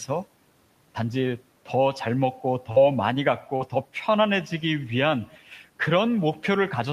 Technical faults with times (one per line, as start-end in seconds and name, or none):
2.71-2.79 burst of packet loss
3.56-3.63 short concealed packet loss